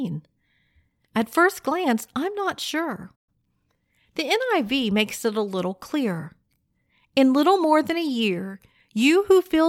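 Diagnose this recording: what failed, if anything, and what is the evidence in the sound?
Playback stage, and it's a playback stall. Right after "glance I'm not sure" the speech just drops out at 3.15 s and stays silent until 3.29 s, about 120 ms of nothing in mid-flow. That's long enough to hear as a hiccup rather than a click. The likely cause is the player's output buffer running dry, or its audio thread getting blocked, so it had nothing to hand the device until it recovered.

Straight after, from 3.29 to 3.77 s, you get time-compressed catch-up. The speech comes back hurried, running at about 1.25 times normal speed while the pitch holds steady. The player is working off the backlog the stall left behind by snipping out small slices of audio and cross-fading across the joins. That's why the pace jumps without the pitch going chipmunky.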